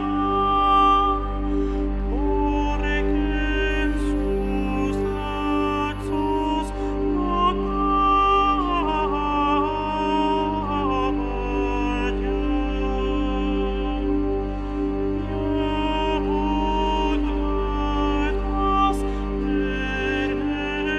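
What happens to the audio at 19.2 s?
Nothing goes wrong at 19.2 s; the audio there is intact, with no dropout, click, distortion or other fault.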